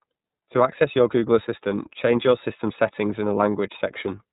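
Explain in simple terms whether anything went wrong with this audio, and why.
iLBC codec damage runs through the whole recording. The codec squeezes speech into small independent chunks, which fits 30 ms frames, and throws away everything above about 3.8 kHz, so the speech sounds muffled, slightly rough and plainly artificial.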